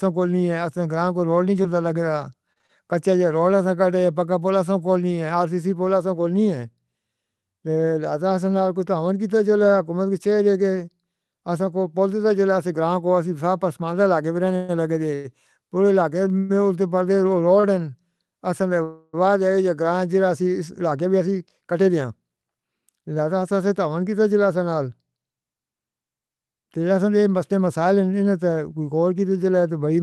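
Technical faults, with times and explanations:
1.63–2.71 s, repeated packet loss (robotic sound): six short holes open in quick succession, the longest 35 ms. The receiver papers over each by stretching the sound just before it, about 102 ms of patching in all, though some 40 ms of real speech never arrives. Roughly 9% of the stretch is concealed material, and that repeated, looped-over fill is what gives the speech its choppy edge here.
14.56–17.65 s, repeated stalls (stutter): four times the stream runs dry because packets come in late or too slowly, and the jitter buffer empties. Each wait is bridged by prolonging the last sound, the longest for 126 ms, totalling about 363 ms of filler. Nothing is actually lost, so the speech doesn't skip. Instead it hesitates and drags, catching repeatedly like a stuck playback before picking up again.
18.83–19.15 s, call audio freeze: the sound hangs for about 300 ms, held as a continued buzz or hiss rather than dropping into silence, then resumes exactly where it left off with nothing skipped. 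This likely reflects packets being held up in transit until the jitter buffer emptied. The hold adds roughly 300 ms of extra delay to the call, which explains the pause inserted into the speech at this point.
20.91–23.19 s and 27.52–28.01 s, jitter buffer speed-up: the buffer holds more audio than it wants and sheds the excess by cutting tiny pitch-period-sized slices out of the speech again and again. Playback runs at about 111% in the first stretch, trimming roughly a third of a second, and about 109% in the second, trimming around 50 ms. Pitch stays put, but the delivery sounds rushed.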